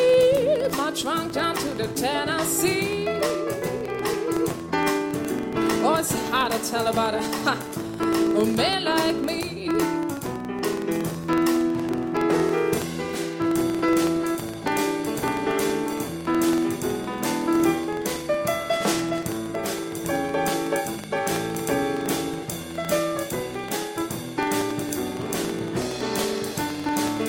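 Throughout the clip, a filter restarted on every block produces a buzz at about 21.5 Hz, which fits a 2048-sample block. The filter loses its state at each boundary and starts from silence, so each block opens with a small transient. The resulting ticks rise and fall with the level of the sound.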